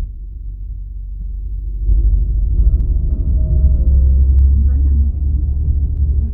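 A recording of sounds, with a regular click from 1.22 to 5.97 s, recurring every 1.58 s, about four times. These are likely clock drift buffer slips: two clocks disagreeing by roughly a hundred parts per million, so a handful of samples gets dropped or repeated at each slip.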